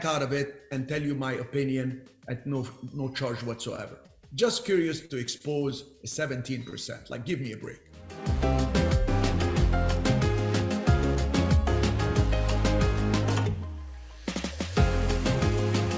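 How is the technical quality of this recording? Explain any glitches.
There's one glitchy patch. Between 3.76 and 6.74 s you get scattered short gaps: about seven lost or late packets, each patched by stretching the preceding sound, so there are brief ticks and smears, the longest around 40 ms. It all runs through a call path that cuts everything above 8 kHz, which fits a wideband G.722 call codec.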